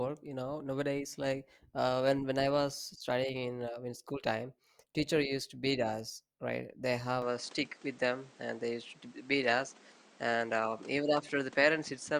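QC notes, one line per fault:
7.22–12.19 s, input switched to a poorer device: the input likely jumped to a lesser microphone, with no gap at the switch. Nothing passes above 9.7 kHz afterwards, so the speech turns duller, and new background noise appears about 30 dB down at an unchanged level.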